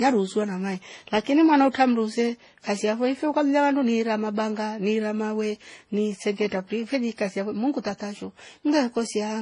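From start to finish the speech carries layered compression damage, likely from transcoding between lossy codecs: a low-rate HE-AAC stage, around 16 kbit/s, followed by MP3 at roughly 32 kbit/s. Nothing is present above 10.5 kHz, so the top end sounds closed off. The MP3 stage wastes bits re-encoding the earlier artefacts and adds its own, so the different artefacts of both codecs are heard together.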